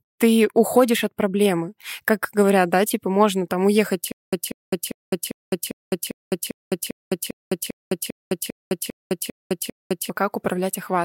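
Playback most likely stalled at 4.12 s, just after "типа можно там уехать", with each retry replaying the last fragment before running dry. The result is a stutter with silent gaps lasting until 10.10 s: a 190 ms burst of speech repeats 15 times, each followed by 208 ms of dead digital silence, giving an even cycle of about 0.4 s. Whatever speech should have filled those six seconds is lost.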